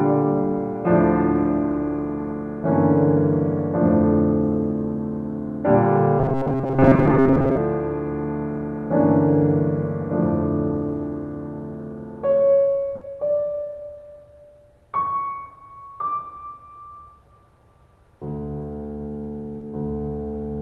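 From 6.19 to 7.57 s, new audio was likely arriving too seldom, so the player kept repeating its last few milliseconds. This is robotic sound from repeated short buffers. Most of that stretch is copies, and the music turns into a rigid metallic buzz at 134 Hz, which points to a buffer of about 7.5 ms.

At 12.95 s comes a burst of packet loss. About 60 ms of audio never arrived, and the receiver stretched the last sound across the gap while fading it. That gap is heard as a brief held, dimming sound before the music resumes slightly further on, with 60 ms skipped.

At 19.59 s, a short concealed packet loss left about 20 ms missing. The decoder patched the hole by continuing the preceding sound and blending back into the real signal, which is heard as a quick smear or wobble in the music.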